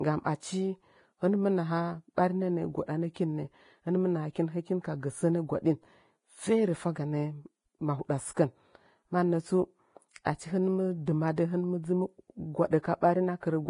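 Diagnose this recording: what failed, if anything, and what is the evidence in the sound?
The speech has a hard ceiling: nothing exists above 10.5 kHz, and the band below it sounds hissy and grainy, with roughened vowels and soft consonant edges throughout. On a spectrogram this appears as a flat horizontal cut at 10.5 kHz, with speckled, noise-like texture replacing the fine harmonic structure beneath. The fault is at the codec stage: heavy Vorbis compression is the likely cause. The coarse quantisation of the upper residue fits a low bitrate of around 29 kbps.

Pre-echo, also a codec-stage fault, precedes sharp onsets at 2.16 s, from 3.14 to 3.16 s, at 10.24 s just before "achi hɨn", and at 13.01 s. Each time, a short hiss lasting 13 to 20 ms leads into the attack, which then sounds smeared. In the waveform, a low noise skirt rises ahead of the transient. On the spectrogram, a broadband smudge begins 13 to 20 ms early. 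The transform block spread its quantisation noise, sized for the loud attack, across the quiet stretch before it.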